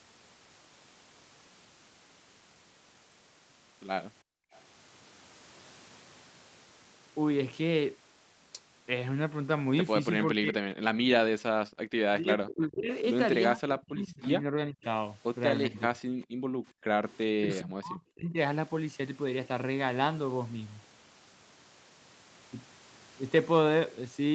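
At 4.23 to 4.53 s the room background drops out abruptly, by about 36 dB, then returns. This is background gated by the echo canceller: while the far side's audio played through the loudspeaker, the canceller clamped the microphone hard, taking the ambient sound with it.

From 10.35 to 10.64 s the talker's speech sinks by roughly 40 dB for a moment. This is speech suppressed in double talk. Both sides were likely talking at once, and the canceller, unable to separate local speech from loudspeaker echo, turned everything down.

The same background gating returns at 11.62 to 11.91 s, a dip of about 40 dB.

Between 12.19 and 15.99 s the speech is pulled down again in pieces, by roughly 35 dB, adding up to around a second and a half of lost level across that stretch.

Inside that stretch, from 14.27 to 14.84 s, a faint delayed copy of the speech appears, trailing by 402 ms at roughly 30 dB below the main speech. 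This is echo leak. The far end's canceller likely failed to remove all the loudspeaker sound its microphone picked up, and the residue was sent back. The echo comes back at 15.78 to 17.58 s with a 403 ms delay and the same low level.

During that second echo, the background is gated again from 16.27 to 16.88 s, dropping about 38 dB for half a second.

Finally, from 17.26 to 18.36 s, the speech is suppressed once more in double talk, dipping by roughly 40 dB for about a second in total.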